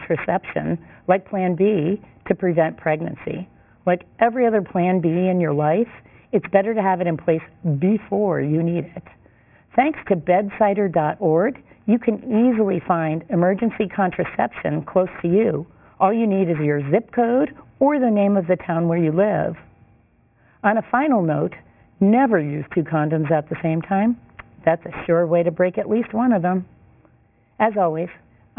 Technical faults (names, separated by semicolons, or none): aliasing